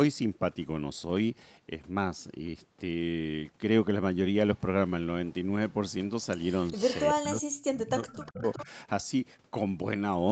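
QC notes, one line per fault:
6.67–7.05 s and 8.1–8.65 s, echo leak: a faint copy of the speech trails about 370 ms behind, roughly 15 dB down, likely loudspeaker pickup the echo canceller didn't fully remove.
7.13–8.45 s and 8.65–8.69 s, speech suppressed in double talk: the talker dips hard, around 40 dB at worst, then briefly a few dB, likely the canceller ducking both sides during overlap.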